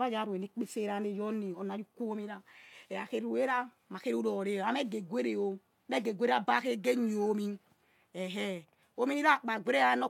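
No technical faults are audible.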